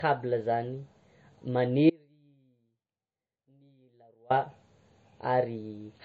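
From the start, the speech has nothing above 8.2 kHz and the dull, smeared texture of heavy MP3 coding, yet it is carried in a high-bitrate MP3 stream. This is low-bitrate audio saved at a high bitrate. It was likely first encoded at a very low rate, consistent with about 32 kbit/s, then re-encoded at 320 kbit/s. The second pass keeps the first encoder's band limit and artefacts but cannot restore the discarded detail.

At 1.90 s the speech cuts off abruptly and returns just as suddenly at 4.30 s, a gap of about 2.4 s. This is an audio dropout to a faint residue. The gap is not silent. A weak trace of sound remains, roughly 35 dB below the normal level. The likely cause is the wanted signal being lost while the path after the break stayed live, leaving only faint low-level sound rather than a natural pause or fade.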